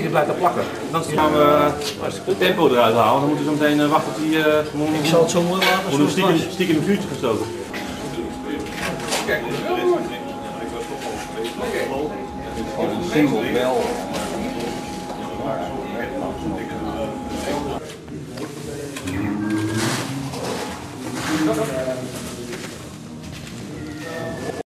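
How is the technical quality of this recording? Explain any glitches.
One fault is audible. From 18.57 s to the end, a doubled audio track appears: an equally loud, dry copy trails by roughly a tenth of a second, likely from a second, slower capture path.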